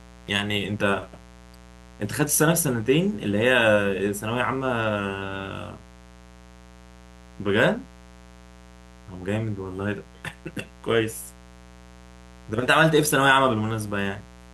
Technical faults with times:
0.00-14.54 mains buzz

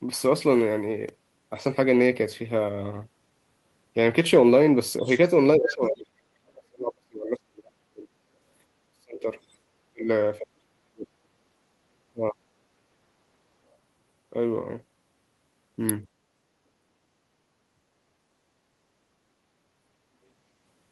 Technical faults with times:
4.99-5.75 other side's voice leaking through
5.02-8.18 speech suppressed in double talk
8.93-9.28 speech suppressed in double talk
9.50-9.55 other side's voice leaking through
9.92-11.17 speech suppressed in double talk
12.13-12.36 speech suppressed in double talk
17.75-17.82 speech suppressed in double talk

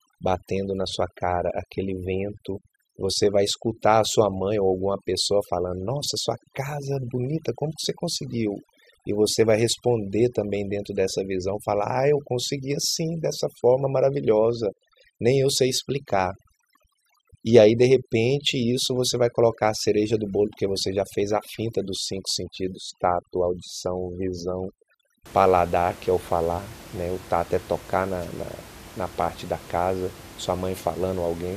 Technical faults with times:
0.00-25.26 overdone noise removal

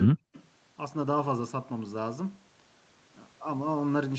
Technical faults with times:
0.05-0.28 speech suppressed in double talk
0.34-0.42 echo leak

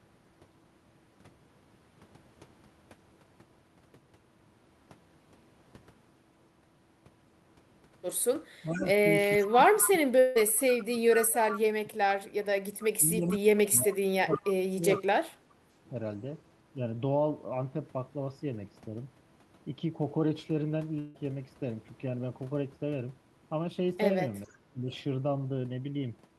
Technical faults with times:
8.62-15.91 speech suppressed in double talk
8.73-11.59 echo leak
10.19-10.37 long network dropout
12.80-13.37 echo leak
14.31-15.03 echo leak
20.99-21.16 long network dropout
24.44-24.48 echo leak
24.44-24.91 speech suppressed in double talk

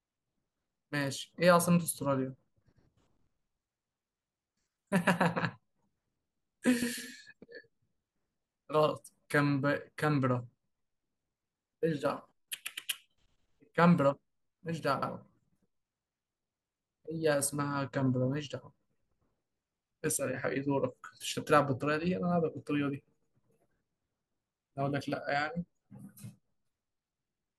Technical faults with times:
6.82-6.93 overlapping chunks
15.02-15.13 overlapping chunks
23.22-23.33 overlapping chunks

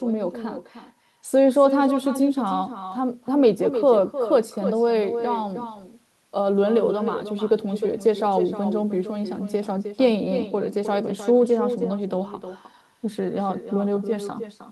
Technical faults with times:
0.00-14.71 echo with no canceller

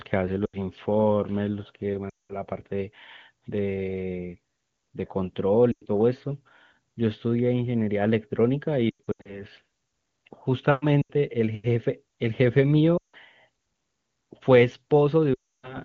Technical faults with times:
0.46-0.57 lost AMR speech frames
2.09-2.35 lost AMR speech frames
5.71-5.86 lost AMR speech frames
8.89-9.44 lost AMR speech frames
11.02-11.11 lost AMR speech frames
12.97-13.16 lost AMR speech frames
15.33-15.77 lost AMR speech frames

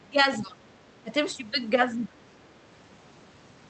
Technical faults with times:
0.00-0.60 speech suppressed in double talk
1.02-1.12 speech suppressed in double talk
1.96-2.17 speech suppressed in double talk

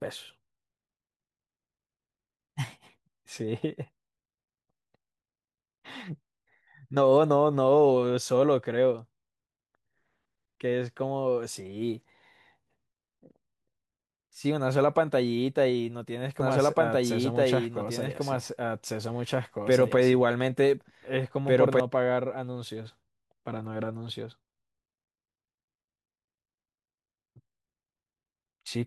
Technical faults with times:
16.40-21.80 doubled audio track

